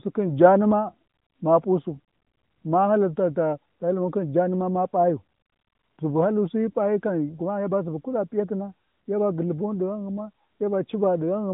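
No faults are audible anywhere in the speech; the narrowband mobile-codec sound, capped at the 4 kHz telephone band with only light coding coloration, is how the AMR-NB path is expected to sound.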